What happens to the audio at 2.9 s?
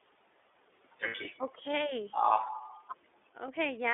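At 2.9 s, as through the whole speech clip, the audio is passing through the iLBC codec, which codes each 30 ms frame's excitation independently and holds the signal to a narrow telephone band of roughly 300 Hz to 3.6 kHz, a character that fits its 13.33 kbps mode. The result is plainly audible codec damage: the speech sounds thin and boxy with no upper range, and carries a rough, slightly synthetic edge.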